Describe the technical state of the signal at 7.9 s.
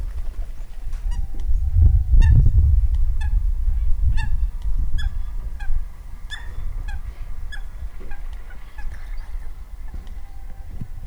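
At 7.9 s, as throughout, low bit depth with dither is present. Dithered 10-bit rounding turns the error into a steady, even hiss about 45 dB below the sound.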